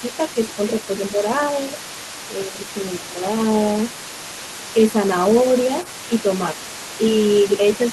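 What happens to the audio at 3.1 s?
At 3.1 s the talker's voice sags for about a quarter of a second, from 2.98 to 3.24 s, dipping by about 5 dB at its deepest before recovering. This is speech suppressed in double talk: with both sides talking at once, the echo canceller likely could not tell the local talker apart from the loudspeaker echo, so it turned both down together.

Underneath that dip, a faint second voice sits roughly 15 dB below the talker, the same leak heard from the start of the clip to its end. This is the other side's voice leaking through: the far end, played over the talker's loudspeaker, reaches the microphone, and the echo canceller is likely leaving part of it in the signal. Its overlap with the talker at this moment is what triggers the suppression.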